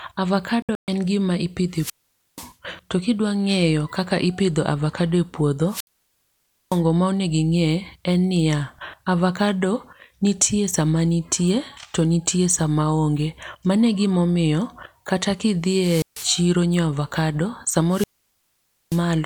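A speech clip with two kinds of fault. The first is a digital broadcast dropout from 0.62 to 0.88 s. The sound breaks into short holes scattered over 256 ms, about 192 ms silent in all, the longest run 128 ms. The receiver lost its signal or rejected corrupted frames and muted until clean frames returned. What fell in those gaps is gone. A second, brief digital dropout hits at 5.87 s, muting about 64 ms. The other fault is a wireless microphone squelch dropout, heard four times: 1.72 to 2.54 s, 5.66 to 6.83 s, 15.65 to 16.48 s, and 17.88 to 19.04 s. Each time hiss swells, then the sound goes almost silent. The silences last 482 ms, 914 ms, 144 ms and 882 ms. The analogue FM radio link weakened until the receiver's squelch cut the output, and the sound returns once the signal recovers.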